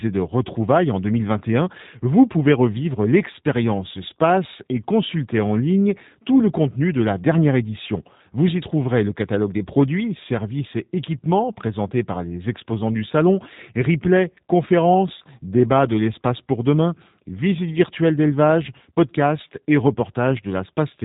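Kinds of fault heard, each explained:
G.729 codec: speech was carried through a low-rate VoIP codec, consistent with 8 kbit/s, that rebuilds each frame from a vocal tract filter, a pitch predictor and a few coded pulses rather than the waveform itself. Here the result sounds plainly rough and synthetic, with nothing above 3.8 kHz.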